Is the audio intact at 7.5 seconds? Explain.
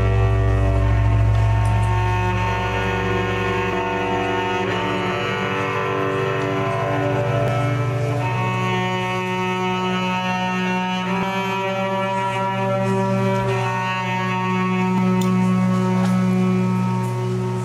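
No. At 7.48 s the audio skips abruptly: about a third of a second is gone, and the two sides butt together with no gap. This is audio missing between chunks, likely from a processor working in 4-second blocks and dropping material at each handover.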